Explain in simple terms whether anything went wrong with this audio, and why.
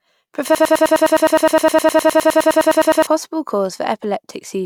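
From 0.55 to 3.07 s the speech sticks, stuttering the same tiny snippet, about 0.1 s long, 24 times in a row. This broken-record loop likely came from the player or stream stalling and replaying its last fragment, so the speech meant for that stretch is lost.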